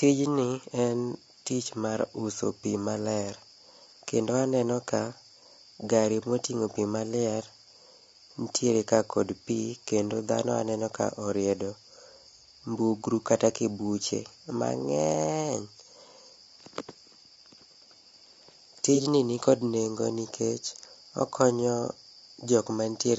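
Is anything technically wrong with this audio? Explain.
Yes. Two faults can be heard.

Low-delay AAC compression runs through the whole speech clip. The damage is plainly audible. The voice sounds rough and grainy. Noise sits between the harmonics, and the top band sounds thin and synthetic. The likely cause is AAC-ELD, the low-delay codec used for video calls. Its short frames resolve pitch harmonics poorly and use up bits. The grain fits a low rate of around 32 kbps.

AAC frame loss with concealment occurs from 18.95 to 19.00 s. About 30 ms of audio is missing, which fits a single lost frame. The decoder patched the gap by reusing the last good spectrum, with altered phase or smoothed energy. The result is a brief smeared, noisy patch. It is too short to fade into silence.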